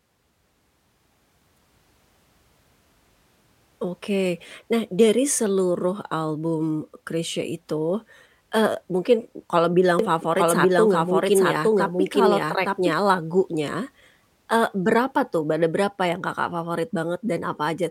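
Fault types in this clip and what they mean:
Doubled audio track: Right after "itu eee mungkin kalau", from about 9.99 to 12.93 s, the speech plays twice, a second copy trailing about one second behind and roughly as loud as the original. The likely cause is a second capture through a slower path, or an edit leaving two copies out of step. Unlike an echo or reverb, the copy is full-band with no decay or room colour, and it starts and stops abruptly.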